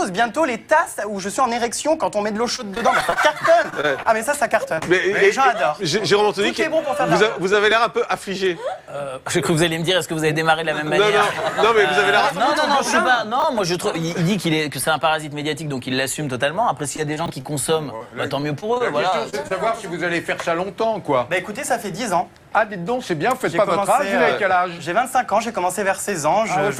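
The audio carries network transport faults. Repeated packet loss (robotic sound) runs from 2.47 to 4.07 s (11 gaps, about 171 ms concealed, longest 24 ms) and from 16.96 to 19.52 s (13 gaps, about 261 ms concealed, longest 41 ms). Each gap is patched by extending the preceding sound, giving a choppy, patched texture. A short concealed packet loss at 4.75 to 4.79 s replaces about 20 ms with a 25 ms smear synthesised from the prior signal. It is followed directly by a short stall from a late packet at 4.79 to 4.83 s, where the jitter buffer ran dry and the last sound was held for 19 ms with nothing lost. Chunks out of order occur at 13.40 s and at 17.26 s, the latter inside the second loss stretch. In each case a 20 ms chunk plays one chunk late, producing a jumbled moment with hard joins.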